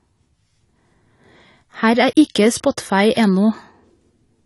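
Throughout, the speech sounds dull and smeared, with nothing above 11.4 kHz. The cause is likely AAC compression at a low bitrate, around 32 kbps.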